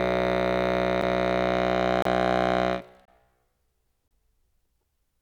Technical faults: gap between stream segments

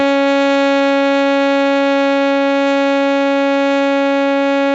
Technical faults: none

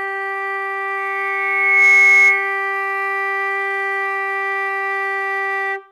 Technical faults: loudspeaker feedback squeal

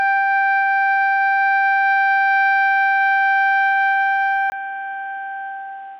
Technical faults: input switched to a poorer device

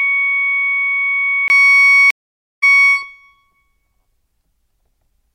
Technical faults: input switched to a poorer device; stream reconnect

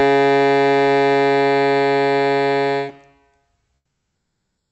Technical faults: comfort noise in place of the background

